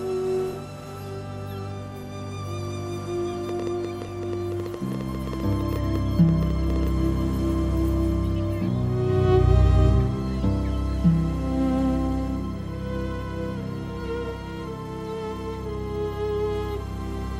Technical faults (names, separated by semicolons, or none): train of clicks